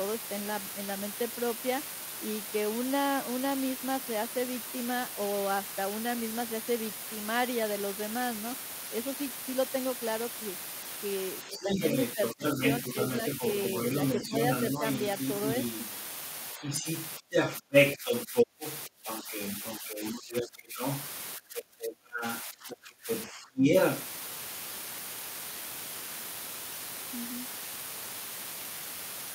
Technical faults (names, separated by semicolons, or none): low bit depth with dither; speech suppressed in double talk; other side's voice leaking through